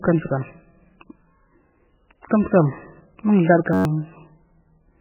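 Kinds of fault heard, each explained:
MP3 compression: Heavily watery, swirly speech with nothing above 3 kHz, likely from very low-bitrate MP3 encoding, near 8 kbps, starving the encoder of bits.
System hang loop: A steady buzz near 94 Hz from 3.73 to 3.85 s, a 10.7 ms slice repeating eleven times as the system froze.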